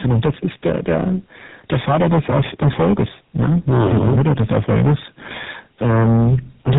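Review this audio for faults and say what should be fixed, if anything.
Hard clipping runs through the whole clip. The level is driven about 18 dB past what the stage can pass. Roughly a fifth of the samples are cut flat. Those flat tops add high harmonics, so every loud sound carries a harsh fuzz. To prevent it, reduce gain before the overloaded stage so peaks stay below full scale.

Tandem speech coding also affects the entire clip. The speech went through AMR-NB at 7.4 kbit/s, then G.711 mu-law, then GSM full rate at 13 kbit/s. That is two speech coders in a row, with the second coding the first one's damaged output. Nothing above 3.8 kHz survives. The result is rough, muffled and warbly. To prevent it, keep one codec end to end, or pass the coded stream through unchanged between networks.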